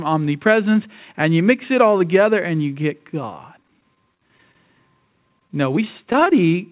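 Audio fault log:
3.63–4.55 s and 5.29–6.33 s: repeated packet loss (robotic sound). Packets kept going missing, about a dozen short holes in the first stretch and ten in the second, none over 20 ms. Each hole was patched by repeating the sound just before it, so the speech turns choppy, and pieces drop out of the 4 kHz-limited call audio.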